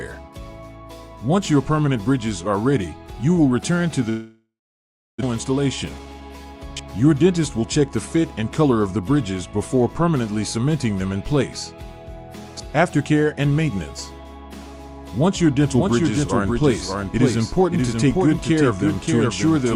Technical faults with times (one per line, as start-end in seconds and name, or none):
4.09-5.24 long network dropout
5.98-6.30 jitter buffer speed-up
15.60-19.76 doubled audio track